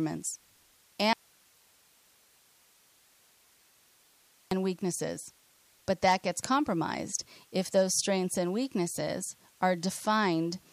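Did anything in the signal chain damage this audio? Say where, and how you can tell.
Yes. An audio dropout to a faint residue runs from 1.13 to 4.51 s, just before "weaknesses but that gets". The speech cuts abruptly to hiss about 35 dB down for 3.4 s, a thin noise band on the waveform and a flat grey floor on the spectrogram. This likely comes from an intermittent analogue connection feeding a still-live input.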